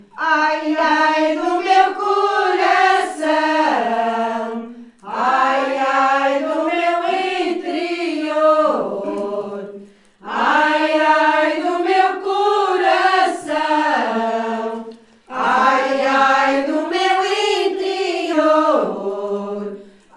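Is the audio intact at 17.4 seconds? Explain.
No. At 17.4 seconds the audio sits inside a stretch of wrong sample rate running from about 16.91 to 18.33 s. There the samples are played back faster than they were captured, with no rate conversion, roughly 24 kHz against 22 kHz. Speed and pitch rise together: the sound runs about 1.09 times fast and sits about 1.5 semitones sharp. It comes across as brighter and slightly hurried for that span.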